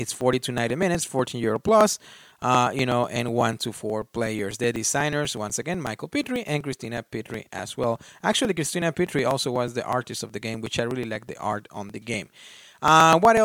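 From about 0.09 s right through to 13.37 s, the speech is peppered with periodic USB or driver dropouts, one every 0.123 s, so roughly eight a second and around a hundred in all. Something keeps stalling the USB bus or audio driver on a fixed cycle, and each time a sliver of audio, around 2 ms, just gets skipped rather than padded with silence. You hear it as a steady ticking riding on the speech.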